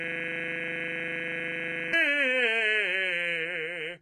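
A system hang loop is already under way when the music starts: the computer stalled while the audio hardware kept replaying one 40 ms stretch of its buffer. Until 1.93 s that fragment repeats about 47 times, fusing into a steady buzz at 25 Hz.

Throughout the clip, the treble is rebuilt from copied lower bands, likely from heavy HE-AAC compression at a very low bitrate, around 16 kbps. Nothing sounds above 11.8 kHz, and the upper range has a gritty, metallic sheen whose harmonics don't line up with the body of the music.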